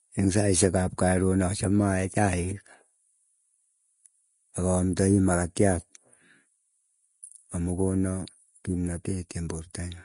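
From start to finish the speech carries plainly audible coding damage, most likely Vorbis compression at a low setting. Nothing comes through above about 10.6 kHz, so the top end sounds dull and boxed in. The treble that survives is quantised so coarsely that fine detail turns into hiss of similar energy. Sibilants and breathy sounds come out grainy, and consonant onsets are smeared, which fits a bitrate down around 31 kbps.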